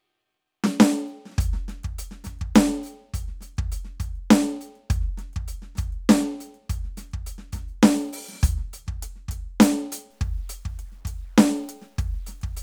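Music clip; from 10.10 s to the end at 12.62 s it turns grainy, with distortion tracking the signal and about 40 dB below it. This is likely low bit depth without dither, consistent with truncation to 10 bits, visible as stair-stepped waveform and signal-following spectral hash.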